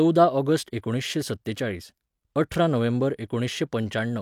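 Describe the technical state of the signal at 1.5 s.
At 1.5 s the speech signal is intact, with no audible fault at that point.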